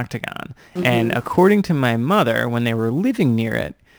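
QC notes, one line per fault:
Throughout: sample clock jitter. The converter's timing wanders by something on the order of ten microseconds, so each sample lands a little early or late. The resulting error scales with how steeply the waveform is changing, leaving a rough hiss about 25 dB under the speech that swells on loud, bright syllables and sibilants and disappears in pauses. On a spectrogram, a faint broadband haze tracks the speech energy, strongest above a few kHz, and drops out entirely in gaps, while the waveform itself looks normal.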